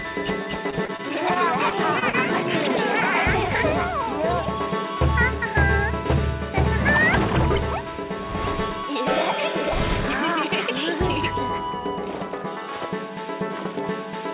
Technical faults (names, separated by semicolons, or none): repeated packet loss (robotic sound)